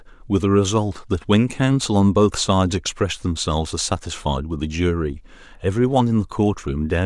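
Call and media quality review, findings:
Nothing to flag here, as the speech comes across with no audible faults anywhere in the recording.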